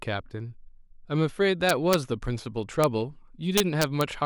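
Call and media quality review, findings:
Integer overflow on speech peaks at 1.69–1.94 s (about 1 dB over full scale), at 2.84 s (just reaching the limit) and at 3.58–4.01 s (about 2 dB over). Violent cracks, not the flattened buzz of clipping. Probable component: unsaturated fixed-point gain or mix stage. Samples past the integer maximum wrap to the opposite sign and jump across the full range. Saturating arithmetic would have limited them.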